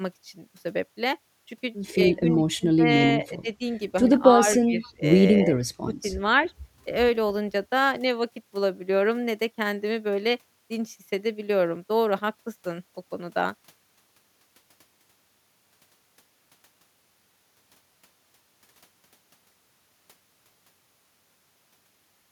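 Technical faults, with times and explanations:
2.08–3.61 s, 4.24–4.47 s, 4.65–5.02 s, 5.44–5.53 s and 5.82–6.09 s, speech suppressed in double talk: the speech sinks in level in patches. The longest and deepest drop comes early, where roughly a second of the first span falls by around 25 dB. The 5.82 s dip is similarly deep, 4.65 s is moderate, and 4.24 s and 5.44 s are slight. The likely cause is an echo canceller that, with both ends talking, mistook this talker for loudspeaker echo and attenuated it.
4.55–4.65 s, echo leak: a faint, brief copy of the speech surfaces about 265 ms behind the original, roughly 30 dB below it, just before the next suppression begins. It is most likely residual echo from a far end on loudspeaker: that end's canceller failed to remove everything its microphone caught from the speaker, so a delayed, weak trace of the voice was transmitted back.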